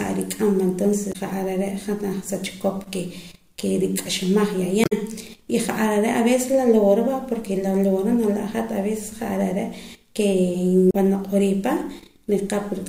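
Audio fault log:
1.09–1.16 s, 4.81–4.92 s, 10.89–10.95 s: damaged data in a compressed stream. Corrupt frames make the decoder misread and lose sync, leaving brief chirps, squawks, clicks or short holes, 60 to 110 ms long, in the speech.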